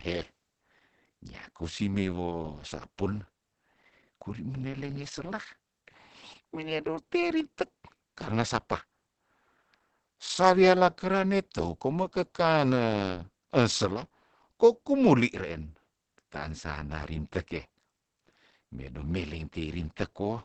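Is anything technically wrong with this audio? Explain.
Yes. Throughout, the speech sounds muffled and hoarse, with nothing above 8.6 kHz. The likely cause is Opus compression at a low bitrate near 16 kbps, running its SILK speech mode.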